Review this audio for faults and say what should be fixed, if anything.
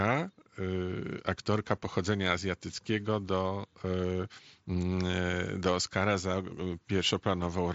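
Nothing here needs fixing; it's speech over a Bluetooth mSBC headset link, with the sound topping out around 7.7 kHz as that wideband path allows.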